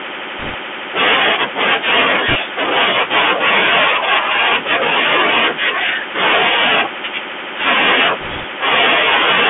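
Speech carried over a Bluetooth CVSD headset codec: its one-bit, step-adaptive coding, which fits a 64 kbps link, confines sound to roughly 200 Hz–3.4 kHz and leaves audible granular hiss and scratchy sibilants. Bit errors on a Bluetooth voice link, at a few percent, corrupt the stream from 0.39 to 0.55 s, 2.28 to 2.36 s and 8.21 to 8.44 s, adding brief rushing crackle rather than loud clicks.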